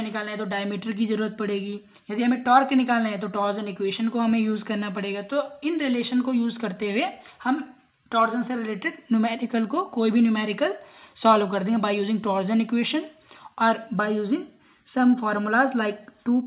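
There are no technical faults to describe in time order; the sound comes through a narrowband call path with nothing above 4 kHz.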